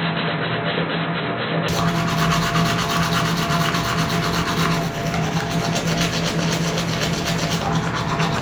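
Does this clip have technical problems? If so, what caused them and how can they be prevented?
Yes. From 0.0 to 1.68 s the audio is band-limited, with nothing above about 4.1 kHz, and carries a faint extra noise floor well below the signal. At 1.68 s it opens up to full bandwidth with no gap and no obvious level jump. This is likely an input switched to a poorer device, such as a headset's call profile, that was in use before the better microphone took over. To prevent it, lock the recording input to one device and disable automatic device switching before recording.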